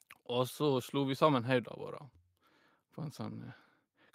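No audible technical faults at any point in the speech recording.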